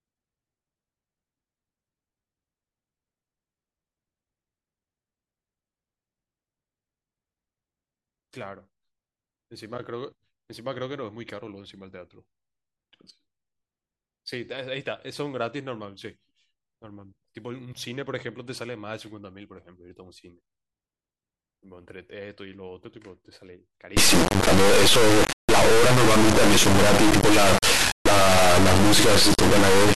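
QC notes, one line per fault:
23.97–29.95 s: integer read as float. From 23.97 s to the end of the speech, the signal turns into an extremely loud, harsh buzz like a square wave. The samples appear to have been stored as 32-bit integers but decoded as 32-bit floats. Reinterpreted that way, most values land either near zero or far past full scale. The output therefore slams between silence and the clipping limit. In the quietest moments it drops out to silence instead.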